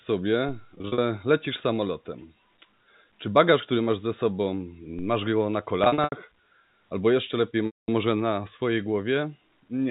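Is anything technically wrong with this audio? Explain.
Yes, a couple of things, and they sit on top of what is otherwise a normal narrowband G.711 A-law telephone path, capped at 4 kHz.

First, there's a DC step at 0.49 s and again at 4.99 s, the second landing between "który masz ze sobą" and "go na". The waveform's zero line suddenly jumps, as if an offset got switched in, then bleeds away as a roughly 2 Hz high-pass pulls it back toward zero. You hear each one as a low thump, while the speech carries straight on.

Second, there's packet loss with pitch repetition in three spots. From 0.78 to 0.98 s, about 120 ms goes missing in bits scattered across 200 ms, with no gap longer than 40 ms. That sounds like a slightly held, buzzy smear, because the receiver loops the last pitch period to cover each hole. From 5.84 to 6.12 s, just after "go na", 180 ms is lost across 280 ms, with runs up to 80 ms. 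The repeats there start fading toward silence before the audio cross-fades back in. The worst spot runs from 7.66 to 7.88 s, between "albo jeszcze lepiej" and "może na swojej", where 220 ms drops out. The concealment fades out over roughly 50 ms. The lost stretches divide neatly into 20 ms chunks, which fits 20 ms packets.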